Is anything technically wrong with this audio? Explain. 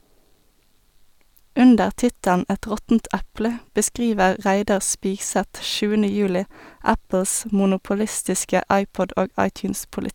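No, nothing is technically wrong with this audio. No fault can be heard anywhere in the recording.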